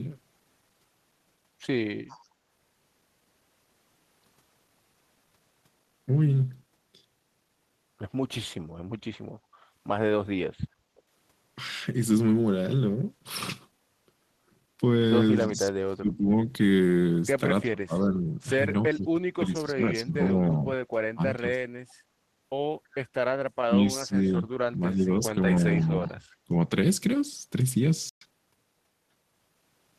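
A speech recording of about 30 s, it carries four kinds of call-processing fault. Echo leak appears at 2.08–2.28 s, 10.96–11.02 s, 18.95–18.99 s and 25.8–26.09 s. Each is a faint copy of the voice trailing by 332 ms, at about 25, 40, 30 and 35 dB below the speech. The likely cause is a far-end loudspeaker whose echo canceller let some of its microphone pickup return down the line. On a spectrogram these show as weak, smeared repeats of the preceding harmonic patterns, offset by a third of a second. From 9.48 to 11.05 s the background is gated by the echo canceller. While the loudspeaker was active, the canceller pulled the microphone down, so the room tone dips by up to about 9 dB in short bursts totalling around 0.4 s before recovering. A waveform shows the noise floor notching downward in steps, and a spectrogram shows the broadband background thinning in vertical bands. Speech is suppressed in double talk from 15.5 to 21.46 s and again from 23.47 to 26.55 s. 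The voice drops by up to roughly 30 dB and then roughly 35 dB, over about 3 s and about 1.5 s in total. The likely reason is that both sides spoke together and the canceller, unable to tell talker from echo, attenuated everything. Finally, a playback stall silences the output for 120 ms at 28.09–28.21 s, likely because the player ran out of data or its thread was blocked. It appears as a flat gap in the waveform and a blank vertical strip on the spectrogram.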